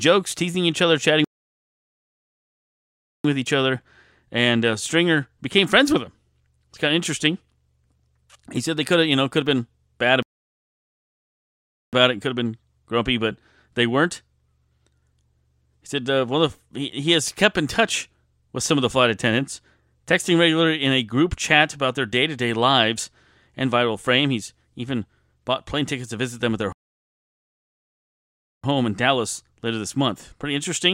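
The speech cuts to silence three times, each a playback stall: at 1.24 s after "teasing each other chatting" for 2.0 s, at 10.23 s after "could have been bad" for 1.7 s, and at 26.73 s after "visit them at their" for 1.9 s. The player likely starved for data or was blocked. Unlike a brief dropout, each long silence ends with the speech resuming, with "with each other and", "it could have been" and "home in".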